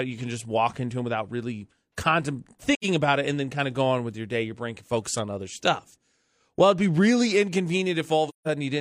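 At 2.74 s to 2.85 s, just before "about it and then", the speech fades into a brief silence of roughly 85 ms, consistent with two lost frames. At 8.29 s to 8.47 s a longer gap of about 170 ms follows. Both are AAC frame loss with muting: the decoder zeroed the missing spectra, and overlapping windows soften the edges.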